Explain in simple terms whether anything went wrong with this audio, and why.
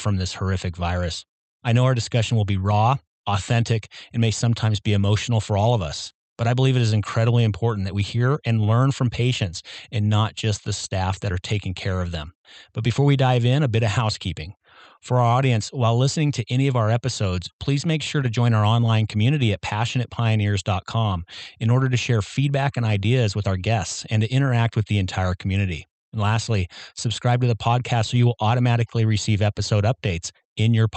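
Nothing went wrong here; the audio has no faults.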